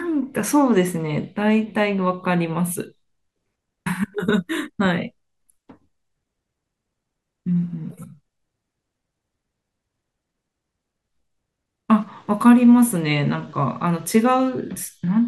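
A speech recording with nothing technically wrong with it.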